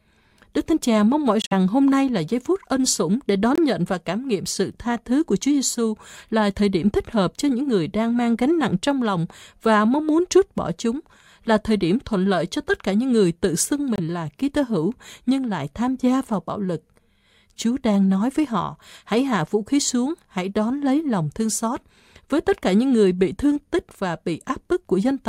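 Speech, with three abrupt silent holes from corrupt frames being muted: 1.42–1.52 s after "mong mỏi", 3.55–3.58 s after "phút ân sủng để", and 13.96–14.0 s after "những người tự xưng". The decoder rejected damaged frames and dropped in silence, so each hole spans one or more frame lengths while the timing stays intact.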